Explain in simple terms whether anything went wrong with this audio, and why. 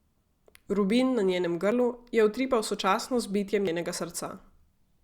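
The speech skips twice, at 1.72 s (between "na njenem" and "je utripal sočasno z") and at 3.67 s. This is audio missing between chunks. A tiny slice, roughly 40 ms, vanishes and the two sides are joined with no silence in between, unlike a dropout, which leaves a gap. The likely cause is a recorder working in 2-second chunks and losing a moment at each handover.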